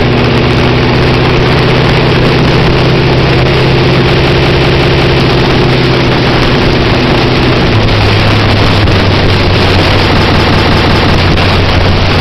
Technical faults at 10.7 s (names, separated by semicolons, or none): system hang loop